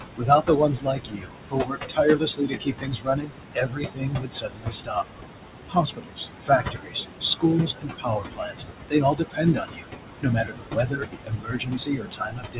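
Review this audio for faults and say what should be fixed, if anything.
Noise suppressor artifacts run through the whole clip. The suppressor pulls the background down by about 21 dB between phrases, then lets it swell back under the speech. Room noise sits only about 5 dB below the speech, so the suppressor has to work hard. To prevent this, reduce the room noise at the microphone or use a gentler suppression setting.

Speech is cut by the noise suppressor at 0.16 to 3.35 s, 3.54 to 5.05 s, 5.68 to 8.58 s, 8.89 to 9.89 s, 10.22 to 11.07 s and 11.24 to 12.6 s. The suppressor mistakes quiet parts of the speech for noise and turns them down by about 20 to 21 dB. Soft consonants and word endings sound swallowed. About 3 s are affected in the first stretch, about 1.5 s in the second, about 2 s in the third and under a second in each of the fourth and fifth. The band-limited sound, with nothing above 4 kHz, fits a narrowband G.711 call path. 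To prevent this, lower the suppression depth or tune its speech detection so that quiet speech is kept.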